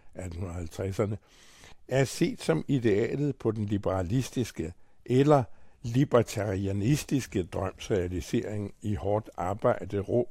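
Nothing goes wrong anywhere in this stretch of speech, so there are no faults to walk through here.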